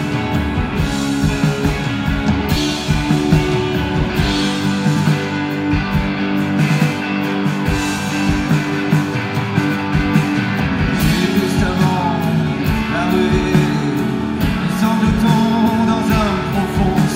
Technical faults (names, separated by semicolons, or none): compressed frames skipped